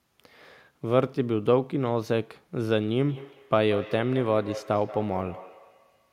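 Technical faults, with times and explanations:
2.98 s to 6.1 s, feedback echo between two devices: the speech returns at a fixed interval of roughly 200 ms, peaking about 14 dB below the direct sound. A second device in the room replays the call, and this microphone picks it up again, outside its own echo canceller's reach.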